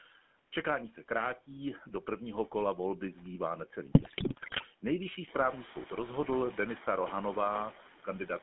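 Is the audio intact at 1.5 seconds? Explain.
No. At 1.5 seconds two faults are present, and both run through the whole clip.

Noise suppressor artifacts are heard at 1.5 s. A suppressor is cutting the background by about 11 dB, deciding band by band and frame by frame what counts as steady noise. The leftover noise therefore dips in the gaps and swells back under the speech.

The GSM full-rate codec is also audible at 1.5 s, and its damage is plain. The speech sits in a narrow line band of about 200 Hz to 3.5 kHz, which fits the original 13 kbps GSM coder. That coder rebuilds the voice from a vocal-tract model excited by evenly spaced pulses that carry only a fraction of the original detail. The result is a buzzy, gravelly roughness laid over the speech, with no treble above the band.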